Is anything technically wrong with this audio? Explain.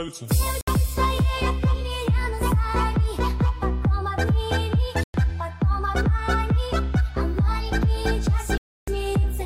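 Yes: three gaps with abrupt edges cut the sound, at 0.61 to 0.68 s (64 ms), 5.04 to 5.14 s (107 ms) and 8.58 to 8.88 s (300 ms). Each is likely a Bluetooth dropout, where packets missed the wireless link and were discarded. The sound resumes as though it had kept playing, unlike a stall that picks up where it stopped.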